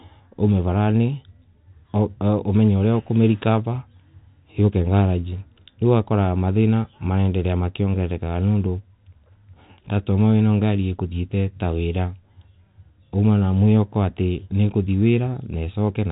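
No technical faults can be heard in this speech; it carries the expected character of G.711 telephone coding, with nothing above about 3.8 kHz and at most a faint, level-following quantisation noise.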